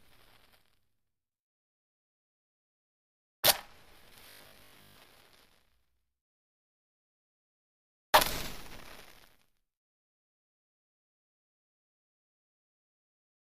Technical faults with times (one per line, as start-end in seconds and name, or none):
4.30-4.96 robotic sound from repeated short buffers